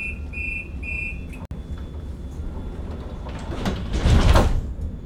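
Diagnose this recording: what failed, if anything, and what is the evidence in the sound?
A brief dropout to silence at 1.45 s, lasting about 58 ms until 1.51 s, with smeared edges, after which the sound resumes exactly where it left off. This is a gap at a join of encoded pieces, a codec-stage fault. The audio was encoded in separate chunks, apparently about 4 s apart, and concatenated without trimming. Each encoder pass adds silent start-up delay and pads its final frame, and both were kept at the splice.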